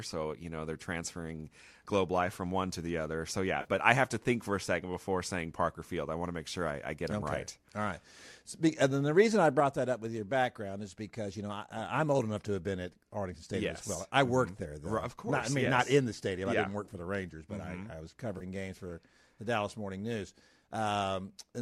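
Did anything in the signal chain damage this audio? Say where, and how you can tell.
Yes. The network or transport stage lost AAC frames, and the decoder had to conceal the gaps. This is AAC frame loss with concealment, heard at 3.61 to 3.67 s, at 15.66 s, and at 18.38 to 18.43 s. The lengths, about 40, 10 and 30 ms, fit whole short low-delay frames going missing. Each gap is short, so the decoder patches it from the last good spectrum rather than fading to silence, and the speech briefly turns smeared and noisy.

A sudden gain jump occurs at 9.6 s. The level drops by about 4 dB in a single step, with no ramp. Speech and background noise fall together and stay at the lower level to the end. Because everything shifts at once, the change happened after capture, not at the talker. It is likely a digital gain or volume setting applied at once somewhere in the call-processing or playback path, rather than a fade.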